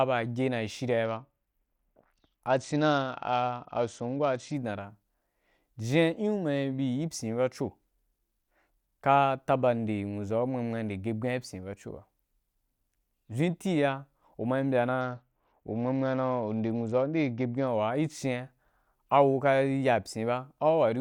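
From 1.05 to 4.54 s there's a Bluetooth SBC bit pool drop, clearing just before "da ra", and again from 15.01 to 17.68 s after "uma yi mbya". The treble goes dull and gritty, which fits the bit pool falling from 28 to 9, roughly 78 kbps.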